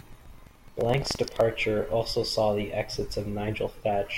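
A coarse, robotic rattle rides on the speech from the start to about 1.43 s, pulsing at 23.4 Hz and tracking the speech. This is buffer tearing: the software filling a ring buffer and the hardware reading it have drifted out of step and cross inside every period. A small slice of each period, around 7 percent, plays audio from roughly 150 ms earlier, with hard joins on both sides. The repeat rate fits a 2048-sample buffer.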